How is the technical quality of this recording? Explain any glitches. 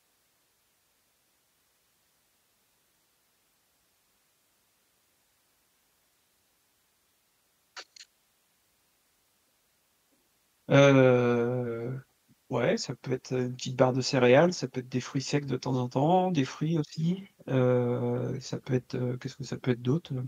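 The recording's technical quality is good, and there are no glitches to explain.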